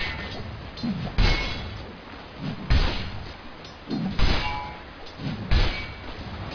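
No technical faults can be heard anywhere in the clip.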